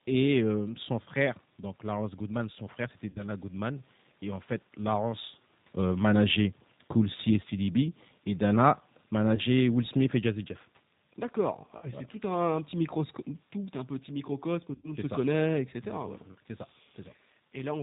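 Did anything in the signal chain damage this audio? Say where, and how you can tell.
Yes. At the codec stage, the whole clip of speech carries G.729 coding at 8 kbit/s. Nothing above 4 kHz survives, and the voice has the slightly rough, synthetic grain of a decoder rebuilding each 10 ms frame from a vocal tract filter, a pitch predictor and a handful of pulses. The damage is plainly audible and constant, so it is the codec and not a passing network event. The room noise heard under the voice is part of the recording.

At the network stage, VoIP packet loss concealed by the speech codec appears four times. It comes at 3.10–3.23 s just after "son frère c'était", with 60 ms lost. It comes at 9.35–9.41 s, with 30 ms lost. It comes at 11.77–11.88 s just before "c'est tout un petit", with 60 ms lost. It comes at 14.75–14.95 s between "tout un petit microcosme" and "monde se connaît etc", with 90 ms lost. 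Each gap is filled by the decoder extending its last pitch and filter at falling gain, which gives a stretched, fading sound, and the voice stays weak for a moment afterwards while the frames recover.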